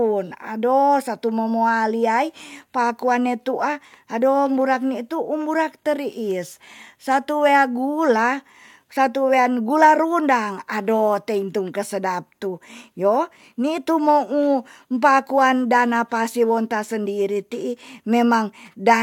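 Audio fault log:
No fault is heard anywhere in this speech recording. Nothing in it calls for an entry in this log.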